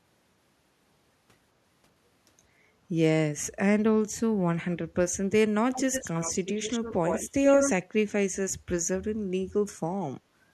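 Echo leak from 5.73 to 7.3 s and again from 7.47 to 7.86 s: a copy of the speech returns 85 ms late, first well below the direct sound, then about equally loud, likely because a loudspeaker's pickup slipped past an echo canceller.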